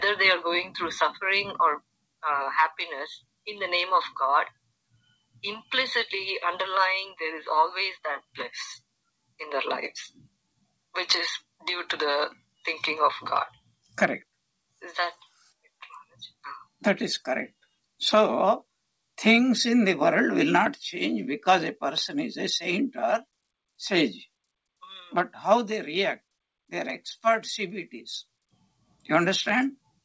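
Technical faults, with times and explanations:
4.91–5.40 s, 10.10–10.35 s and 13.54–13.96 s: sound cut by the noise suppressor. The suppressor treated stretches of the audio as noise and pulled them down by about 19, 16 and 19 dB. Roughly 150 to 200 ms sinks or decays early each time, audible over a band that stops near 8 kHz, consistent with G.722.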